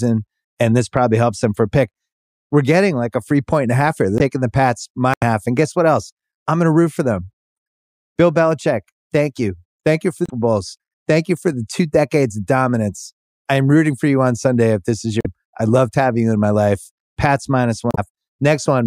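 Stretches of the compressed speech stream arrive as damaged data, so the decoder misreads the frames there, loses sync and hunts for the next valid frame header. Each break is heard as a short chirp, squawk, click or hole cutting through the speech, at 4.17 to 4.21 s, 5.14 to 5.23 s, 10.26 to 10.30 s, 15.19 to 15.26 s and 17.91 to 17.99 s, each lasting between about 40 and 95 ms.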